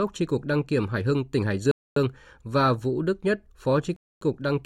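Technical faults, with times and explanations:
1.71–1.96 s and 3.96–4.21 s: gap between chunks. The speech halts for 250 ms at each join between 2.0 s chunks, though none is lost, leaving hard-edged holes. On a waveform these are near-flat, near-silent stretches with abrupt edges; on a spectrogram they are blank vertical bands.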